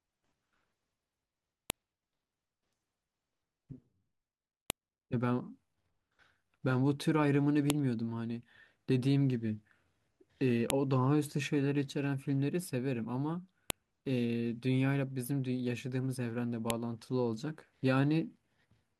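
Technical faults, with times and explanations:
1.70, 4.70, 7.70, 10.70, 13.70 and 16.70 s, file header played as audio: a sharp, loud click lands at each of these points, spaced exactly 3.0 s apart regardless of what the speech is doing. The regular interval shows the audio was assembled from 3-second pieces whose WAV headers were left in place. Those header bytes are decoded as sample values, producing an abrupt jump in the waveform that is heard as a brief snap at every join.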